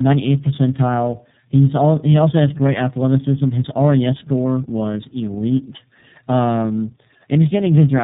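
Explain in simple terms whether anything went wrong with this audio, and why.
The speech sounds rough, dull and warbly from start to finish, worse than an ordinary phone call, with nothing above about 3.8 kHz. The cause is tandem speech coding. The call passed through two different speech compressors in a row, AMR-NB and then iLBC, with a plain phone-line stage between them. The second compressor had to squeeze speech the first had already damaged, so the losses stacked up.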